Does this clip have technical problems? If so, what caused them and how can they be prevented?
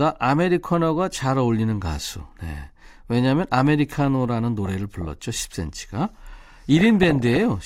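Yes. DAB burbling appears from 4.66 to 5.22 s and again, more heavily, from 6.77 to 7.39 s. Weak reception lets bit errors slip past error correction into the MP2 data, so corrupted scale factors make individual sub-bands jump for a frame. The result is short blips of noise and sub-band level jumps rather than the clean silences of a dropout. Better antenna placement or a stronger multiplex would prevent it.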